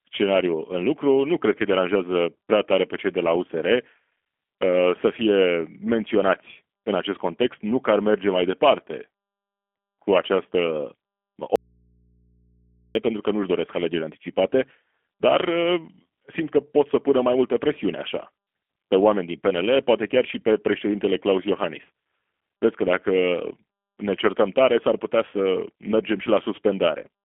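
From start to end the speech carries G.729 codec damage. The sound is narrowed to a telephone band of about 250 Hz to 3.4 kHz, with nothing above 3.7 kHz. It is rough and slightly synthetic, which fits an 8 kbit/s G.729A coder rebuilding speech from a filter and a few pulses.

At 11.56 s the speech cuts out abruptly. It returns at 12.95 s, about 1.4 s later. The gap holds only mains hum, roughly 40 dB down. This is an audio dropout to a faint residue, likely a lost signal feed into a path that stayed live.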